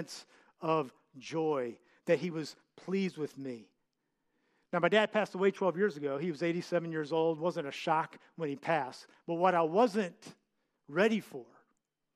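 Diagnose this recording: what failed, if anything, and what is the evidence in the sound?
Nothing here points to a failure at any stage of the chain. The speech carries no audible event that could be traced to wiring, conversion, buffering, call processing, network transport, storage or playback.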